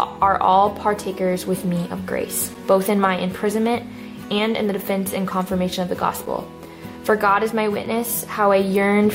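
At 2.54, 6.26 and 7.85 s, 5.8 ms blocks of digital silence, fitting an unfilled 256-sample buffer, tick, showing flat waveform gaps and vertical spectrogram lines.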